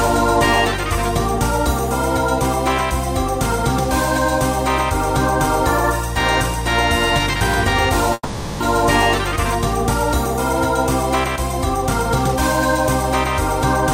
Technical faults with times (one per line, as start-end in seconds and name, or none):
8.13-8.62 call audio freeze